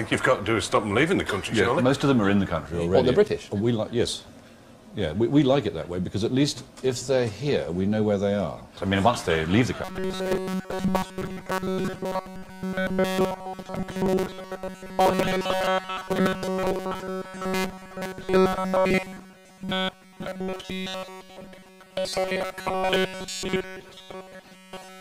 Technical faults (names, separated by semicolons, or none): robotic sound from repeated short buffers